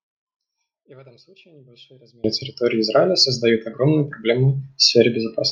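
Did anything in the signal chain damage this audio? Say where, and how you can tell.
Yes. An audio dropout to a faint residue is already under way when the speech clip begins and lasts until 2.24 s. The signal path stayed live while the wanted feed was lost, most likely through an intermittent connection in the analogue wiring ahead of the converter. Until 2.24 s only a faint residue is heard, roughly 35 dB below normal level, and then full level returns abruptly instead of fading up.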